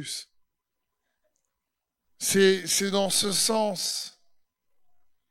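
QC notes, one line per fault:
2.31–5.30 s: time-stretched section. Speech abruptly slows to 0.68 times speed with unchanged pitch, sounding dragged. Likely software repeating short pieces to lengthen it.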